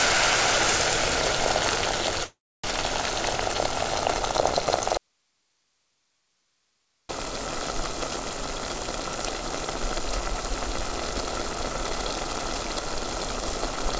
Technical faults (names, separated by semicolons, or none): call audio freeze; audio dropout to a faint residue